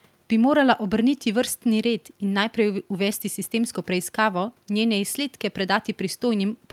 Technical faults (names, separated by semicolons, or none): none